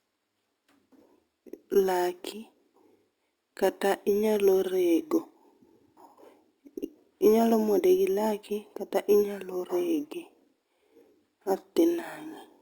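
Throughout the speech, imaging from sample-and-hold upsampling: each sample was simply repeated without a smoothing filter, which fits a jump from 12 kHz to 48 kHz. Mirrored copies fill 6 kHz to 12 kHz at about 23 dB below the speech, a metallic fizz that tracks loudness and moves against the pitch.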